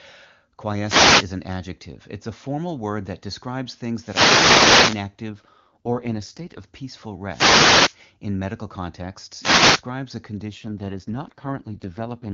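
Wireless microphone noise hits at 0.81–1.32 s (just before "an adjective"), 3.96–5.10 s (after "formal word that describes"), 7.29–7.97 s and 9.39–9.84 s. Each is a burst of static from the FM radio link fading, seen as broadband noise smearing the spectrogram.

AMR rate drops at 5.30–6.64 s and 10.46 s to the end make the speech rough and synthetic without a gap or any loss of bandwidth. This fits a fall from 23.85 to 6.6 kbit/s, and the spectrogram shows blurred, coarser harmonics.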